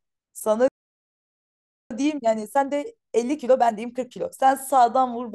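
A playback stall runs from 0.68 s to 1.91 s: the speech cuts off mid-flow and the output falls completely silent for about 1.22 s before sound returns. The gap most likely comes from the player's buffer running dry, or its audio thread being held up, so nothing reached the output until it recovered.

Time-compressed catch-up follows straight after, from 1.91 s to 4.35 s. To recover the backlog built up during the gap, the player trims out short slices of the signal and cross-fades across the joins, so the speech runs at about 1.5 times its normal rate while keeping its original pitch. The result sounds hurried.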